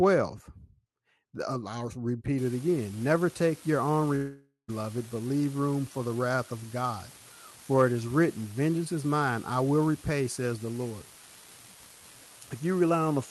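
From 2.38 s, right after "I'll repeat", to the end, an unreliable data bit adds a steady crackle or fizz made of identical-sized spikes. Unlike codec roughness or dropout clicks, it keeps going through the pauses, showing that one marginal data line is flipping at random.

From 4.15 s to 4.71 s the sound turns into a fading buzz and then about 0.12 s of near-silence. This is likely a long network dropout: about half a second of audio never arrived, so the receiver stretched the last sound until it died away. Afterwards the audio resumes without the lost part. That lingering, decaying tail distinguishes it from a single dropped packet.

At 4.68 s, a 20 ms stretch within that recovery is rougher and noisier, but there is no hole. This is a lost packet rebuilt from error correction. The decoder played the low-bitrate copy carried in the next packet, which is rougher than the 12 kHz-limited Opus call sound around it.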